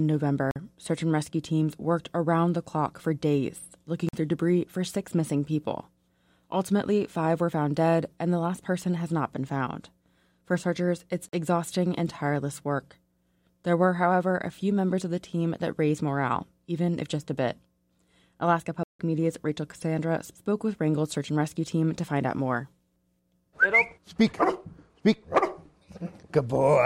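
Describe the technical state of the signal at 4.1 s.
At 4.1 s there is a block of digital silence from 4.09 to 4.13 s, about 46 ms, which fits a 2048-sample buffer left unfilled. The signal drops straight to silence and returns without a fade, leaving a short hole.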